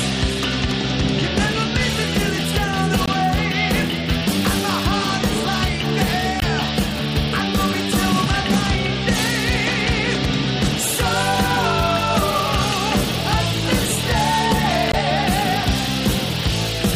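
Three quick blips at 3.06, 6.40 and 14.92 s, each about 30 ms long: damaged data in the compressed stream that trips up the decoder.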